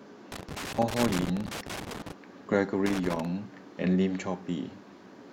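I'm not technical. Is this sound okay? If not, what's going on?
No, it has a problem. The speech picks up loose connector crackle twice: first from about 0.32 to 2.12 seconds, then again from about 2.86 to 3.25 seconds. It sounds like an uneven burst of scratching and crackling over the speech. What's happening is a worn or dirty plug or socket that keeps losing and regaining contact as it shifts, so the sound gets chopped into bits. Reseating or cleaning the connection usually sorts it.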